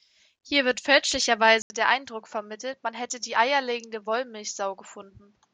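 A speech recording that goes dull at 1.62 s: after a short gap of about 80 ms, the rest of the clip to the end sounds narrower and boxier, with nothing above 7.6 kHz. It also drops roughly 5 dB in level and carries a faint new background noise that sits well below the speech. The likely cause is an input switched to a poorer device partway through, so a different, band-limited microphone with its own tone and noise took over.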